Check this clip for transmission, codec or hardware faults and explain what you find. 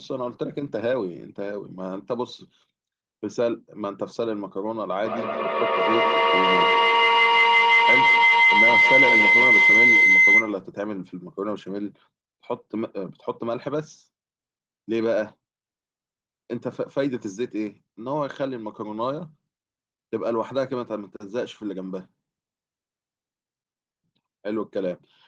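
One fault stands out: a feedback howl from 5.04 to 10.6 s. Two devices in the same room formed a gaining microphone-to-loudspeaker loop, so each repeat grew, narrowing to a tone around 2 kHz, with repeats roughly every 150 ms, and peaking about 9 dB above the speech. Unlike ordinary echo, the repeats build rather than fade.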